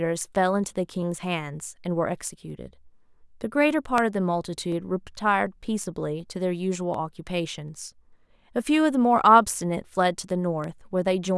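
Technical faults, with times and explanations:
0.29–11.37 s, clock drift buffer slips: two devices likely run on separate clocks around 500 ppm apart, so the buffer between them drifts until a few samples are dropped or repeated, heard as a click in the speech every 0.74 s, about fifteen times.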